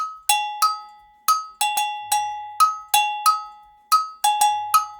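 No technical faults are audible.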